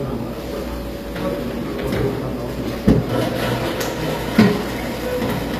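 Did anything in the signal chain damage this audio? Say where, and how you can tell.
Yes, at the codec stage, throughout. The treble is bright but gritty and metallic, with nothing above 14.9 kHz. This points to likely HE-AAC compression at around 24 kbps, where treble is rebuilt by copying lower bands upward. A plain low-pass would sound dull, not synthetically bright.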